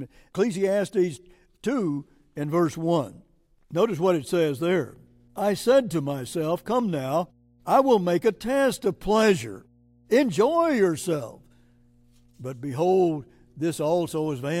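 Speech clip with mains hum from 4.54 s, just after "what it", to the end: a steady 60 Hz tone well below the speech, roughly 35 dB down, likely from a ground loop, fixed in pitch unlike wandering rumble.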